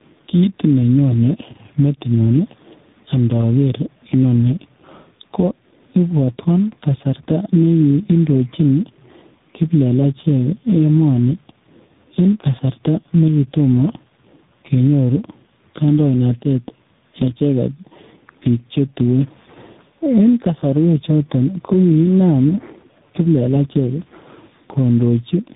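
Across the whole recording, the gain appears to be set far too high for the microphone, with a fast limiter or compressor likely clamping it back down on every loud sound. This produces gain pumping, with the level swinging by roughly 10 dB. Loud and quiet passages sit unnaturally close in level, so the speech sounds squashed.

Also throughout, the call has passed through tandem speech coding, being decoded and re-encoded at each network boundary so that every coder worked on the previous one's damage. The roughness fits a chain running from a low-rate AMR-NB coder, through G.711, into G.726 at 32 kbit/s. This means two lossy speech codecs in a row. Nothing reaches above 3.8 kHz, so the speech is muffled, and it carries a grainy, warbling texture that is harsher than either link would produce alone.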